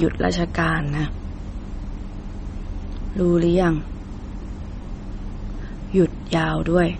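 It's a short speech clip with MP3 compression damage all the way through: nothing above about 8.4 kHz, and a watery, swirly texture with smeared consonants. That's likely an encoder starved of bits, which fits a low rate around 32 kbps.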